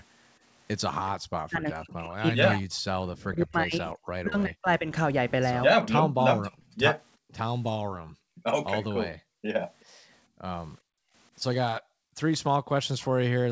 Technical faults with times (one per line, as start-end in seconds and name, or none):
1.47-4.91 speech suppressed in double talk
6.04-8.45 background gated by the echo canceller
6.53-6.75 echo leak
9.16-11.14 background gated by the echo canceller
11.81-12.17 background gated by the echo canceller